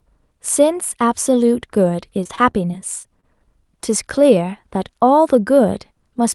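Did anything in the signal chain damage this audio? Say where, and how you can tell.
Yes. From 2.23 to 3.25 s the speech turns choppy and robotic, with short holes up to 25 ms each. This is repeated packet loss on the network: the jitter buffer kept patching missing audio by extending the last sound, so about 13% of the stretch is concealed fill.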